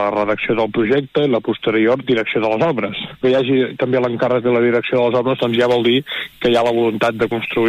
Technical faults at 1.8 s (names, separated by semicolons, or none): de-emphasis applied wrongly